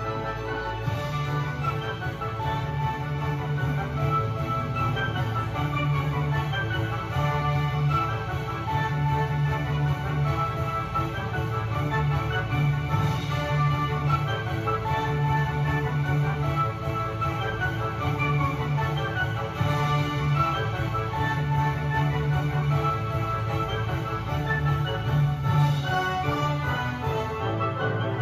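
At 10.57 s, compressed frames skipped: a run of frames never reached playback, either missing or rejected by the decoder as damaged, so the audio lurches forward by about a tenth of a second.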